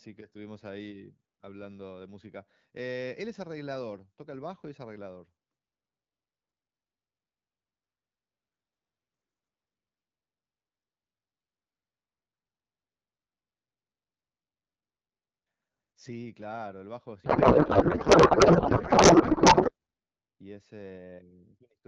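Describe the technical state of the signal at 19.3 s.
At 19.3 s you're inside a codec payload misread running from 17.25 to 19.71 s: octet-aligned AMR frames decoded as bandwidth-efficient, so the speech turns to garbled warble and noise.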